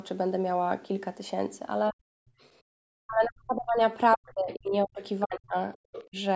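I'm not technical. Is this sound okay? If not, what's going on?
No. The talker's speech keeps dipping or vanishing in pieces: briefly from 1.92 to 1.99 seconds, then for longer stretches from 3.06 to 3.81, 4.16 to 5.02 and 5.23 to 5.55, and once more from 6.07 to 6.17. Each time the speech drops almost to nothing. This is speech suppressed in double talk, likely caused by both people talking at once. The call's echo removal couldn't tell the talker apart from the other person's voice coming out of the loudspeaker, so it turned everything down.

Between 2.27 and 2.41 seconds, and again between 2.62 and 2.78, the quiet room sound behind the talker suddenly sinks and then comes back. Each dip lasts a fraction of a second, the second one deeper. This is background gated by the echo canceller. While the loudspeaker was playing, the echo removal shut the microphone down hard, taking the room sound with it, and let go again moments later.

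From 5.74 to 6.05 seconds a second, much fainter voice can be heard under the talker, well below the main speech. This is the other side's voice leaking through, likely because the talker's device was playing the other person on a loudspeaker and the echo removal didn't clear all of it from the microphone.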